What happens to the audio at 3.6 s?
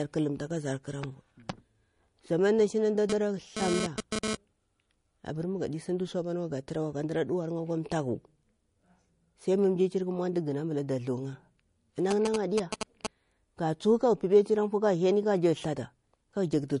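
At 3.6 s the speech sits under GSM phone buzz, which runs from about 3.10 s to 4.35 s. A nearby 2G phone transmitting data in bursts about 217 times a second has its radio pulses rectified by the audio circuit, producing a hard, raspy 217 Hz buzz rich in harmonics and unrelated to the speech. Here it comes and goes with the data bursts, at about 2 dB below the speech level.

Underneath, the whole clip, 3.6 s included, carries plainly audible artefacts that are likely MP3 compression. Nothing is present above 10.6 kHz, so the treble is cut at a fixed frequency, and weak spectral components drop in and out from frame to frame, giving a watery, swirly texture with metallic chirps on s sounds and smeared attacks. The degree of damage fits a low bitrate around 40 kbps.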